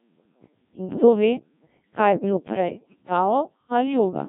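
The whole clip runs through a Codec 2 vocoder. Heavy buzzy, robotic resynthesis from pitch and envelope alone fits a very low rate, around 1.3 kbit/s. From 2.72 to 3.02 s, bit errors on digital voice radio hit a handful of frames, with an error rate somewhere near 7 percent, and the speech lurches into warbly, bleepy gibberish.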